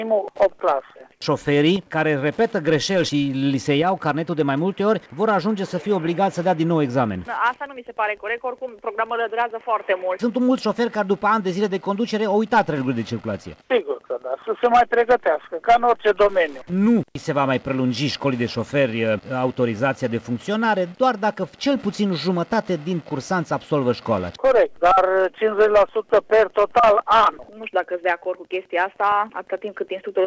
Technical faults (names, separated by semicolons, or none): comfort noise in place of the background; onset clipped by the voice detector